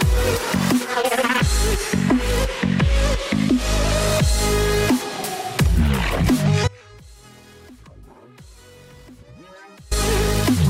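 At 6.68 s the audio drops out abruptly, leaving a faint leak roughly 25 dB down until 9.91 s. It's an audio dropout to a faint residue, likely a signal loss upstream while the path stayed live.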